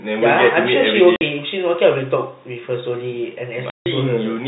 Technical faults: packet loss filled with silence

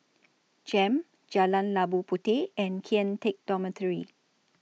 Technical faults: none

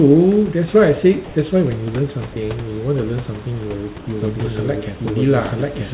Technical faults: comfort noise in place of the background; doubled audio track

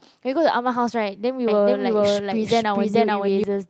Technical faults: lost packet rebuilt from error correction; doubled audio track

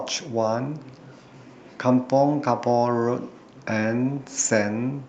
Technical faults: none

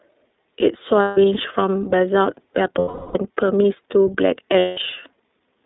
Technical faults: iLBC codec; lost iLBC frames

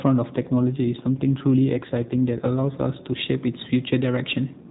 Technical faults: AMR rate drop

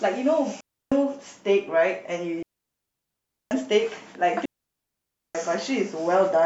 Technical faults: digital wireless dropout

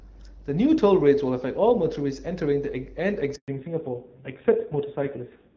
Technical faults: handover gap; fallback to narrowband

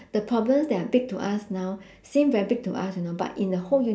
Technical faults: none

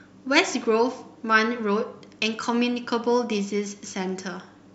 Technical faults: none

